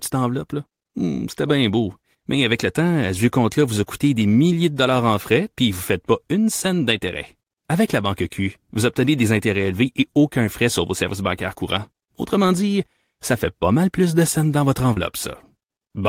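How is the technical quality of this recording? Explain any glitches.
One glitch stands out, a short concealed packet loss near the end. At 14.93 to 14.97 s, just after "de scènes dans votre", about 30 ms of the call's data failed to reach the decoder in time, and the receiver patched roughly 28 ms of it by extending the preceding sound before blending back into the real signal. To the ear this is a brief smear or wobble, with any short consonant in that instant possibly lost.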